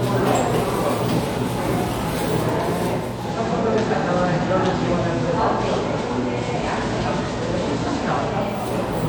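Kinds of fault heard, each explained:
Digital radio blending to analogue: hiss rises and level dips about 1 dB as the receiver, losing its digital signal, cross-fades to FM.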